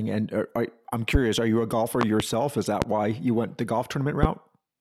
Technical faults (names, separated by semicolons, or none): loud pop